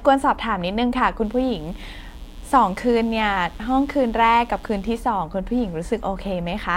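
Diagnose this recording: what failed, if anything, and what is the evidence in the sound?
The analogue wiring picked up mains buzz. From 1.21 s to 5.0 s there's a steady, raspy buzz sitting under the speech, roughly 30 dB down, then it stops cleanly. The rasp comes from harmonics of 60 Hz stacked well up into the kilohertz range, not a pure hum. That points to sharp switching spikes, twice per mains cycle, getting into the signal through a dimmer, a rectifier or a missing shield somewhere along the cable run.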